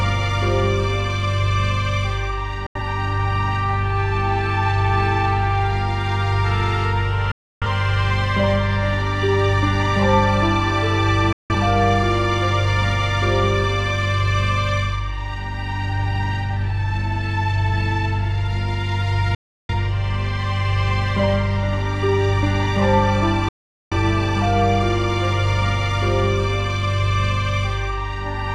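The audio has a digital broadcast dropout, muting with a roughly 3 ms fade at 2.66–2.81, 7.31–7.67, 11.33–11.54, 19.35–19.74 and 23.49–23.97 s. That's the receiver losing signal or rejecting corrupt frames; the gaps fit lost frames of about 43 ms each.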